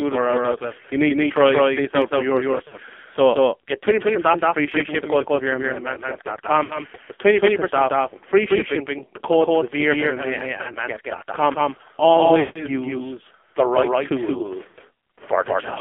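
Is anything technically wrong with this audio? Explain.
Yes, there are three problems.

A doubled audio track runs throughout: a clean echo trails about a fifth of a second behind at roughly equal level, likely from the same signal being mixed in twice.

The sound is buzzy and synthetic, confined to about 250 Hz to 3.4 kHz. This is the AMR narrowband mobile codec heavily squeezed, which fits a low rate near 5.9 kbps.

Lost AMR speech frames cause brief smeared, fading dropouts at 2.68 s (just after "this out for yourself"), 6.64 s, 10.62 s, 12.40 s (before "use the right") and 14.68 s. The decoder stretched the last good frame with falling gain. The gap at 12.40 s is the longest, about 0.26 s.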